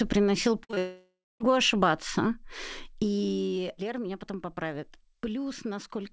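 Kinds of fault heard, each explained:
Burst of packet loss: A run of consecutive packets failed to arrive in time near 0.64 s, losing about 60 ms. The receiver stretched the last sound across the hole and turned it down, so a brief fading buzz or hiss covers 0.64 to 0.71 s.
Short concealed packet loss: Two further 20 ms pieces went missing right after, at 0.71 and 0.74 s. Each hole was patched by extending the preceding sound and blending back in, leaving a quick smeared wobble.
Long network dropout: From 0.78 to 1.52 s, the audio likely stopped arriving over the network, losing about 620 ms. The last sound trails off as a decaying buzz or hiss, then about 240 ms of silence sits in the gap before the speech resumes further along.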